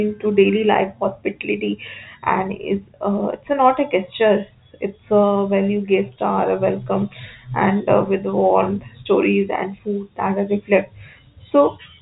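The speech carries the narrow band of G.711 telephone coding, with nothing above 3.8 kHz, and no technical faults can be heard in it.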